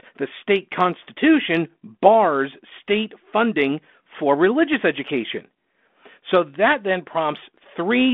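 The speech carries no audible technical faults.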